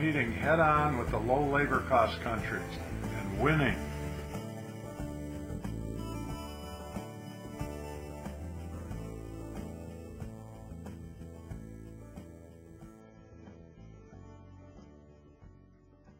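At 13.0 s the stream drops to a lower bitrate and stays there until the end, a classic adaptive stream at a lower bitrate. The player has switched to a much leaner encoding, with the sound pointing to AAC at around 16 kbit/s in place of roughly 96 kbit/s before. The change is abrupt but seamless. Everything above 7 kHz disappears, leaving the audio dull and muffled, and the thinner bit budget brings a noticeable rise in codec artefacts.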